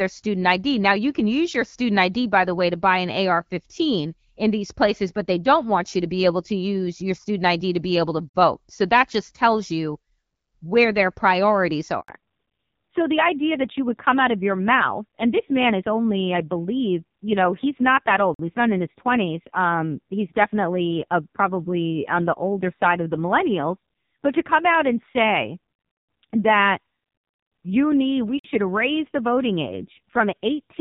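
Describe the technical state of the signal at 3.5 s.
At 3.5 s the speech is intact, with no fault present, and the AMR wideband (HD Voice) coding at 12.65 kbit/s keeps it clear.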